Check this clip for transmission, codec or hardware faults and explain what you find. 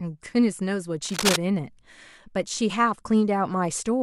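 One hardware fault is audible in this speech clip: cable scratch noise from 1.04 to 1.36 s. For about a third of a second, dense, irregular bursts of scratching and rustling sit over the speech at roughly the same loudness as the speech itself. The likely cause is a worn cable, connector or control being moved, so its contact resistance fluctuates rapidly. Unlike isolated clicks or a dropout, the noise is a continuous, uneven crackle, and the speech keeps running underneath it.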